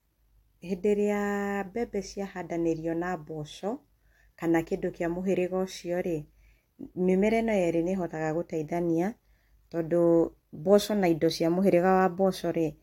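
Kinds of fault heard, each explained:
No technical faults can be heard in this speech.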